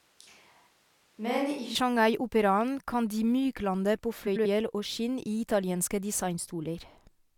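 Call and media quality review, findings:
Switch to a distant microphone, 0 to 1.75 s, already under way at clip start: close mic signal likely lost, feed falling back to a far pickup. Speech roomy and hollow, thinner bass, about 5 dB quieter, more room noise, about 35 dB below speech, snaps back to close sound at 1.75 s.

Frames out of order, 4.26 to 4.46 s: two adjacent runs of frames decoded in swapped order, halves of roughly 93 ms each. Garbled flutter. Same stretch reordered, so no time lost.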